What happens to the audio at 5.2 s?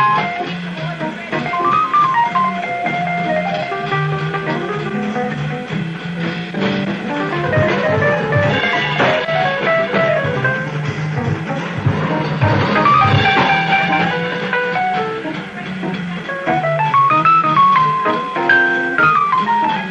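At 5.23 s there is damaged data in the compressed stream. A stretch of the encoded bytes there is wrong, so the decoder cannot read those frames properly. It loses its place in the stream and has to hunt for the next valid frame header before decoding resumes. The result is a very brief glitch, lasting only about 14 ms. It comes across as a short chirp or blip cutting into the audio.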